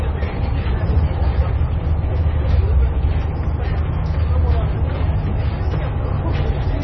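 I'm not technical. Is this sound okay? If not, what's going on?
No. The whole clip has a muffled, watery quality that suggests heavy MP3 compression, likely squeezed into a very small file. Nothing is heard above about 5.9 kHz, so the crisp top end is gone. Faint details seem to flicker in and out, giving a swirly, underwater sound. Sharp starts of sounds come out blurred rather than clean. The damage is heavy and lasts from start to finish.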